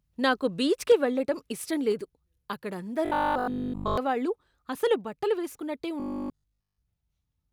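Microphone overload at 0.90 to 0.92 s, just before "వెళ్ళటం ఇష్టం": a peak pushed about 2 dB past the converter's ceiling, likely from input volume set too high. Around a tenth of the samples in that short stretch have flattened tops, giving a brief harsh crackle.

Microphone volume stepped down at 0.92 s, immediately after that distorted peak and still before "వెళ్ళటం ఇష్టం": the input level drops by about 3 dB in a single step, likely the call software reacting to the clipping by lowering the device's gain. The sound and its background become audibly quieter from that moment.

Robotic sound from repeated short buffers at 3.06 to 3.98 s and again at 6.00 to 6.82 s, the second starting right after "అసలు బట్టలు వేస్కున్నట్టే". The sound turns into a rigid, metallic buzz at 50 Hz, which fits a 20 ms chunk being replayed whenever fresh audio fails to arrive in time, most likely a delivery gap. 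In the first stretch nearly all the audio is repeated. In the second, most of it is.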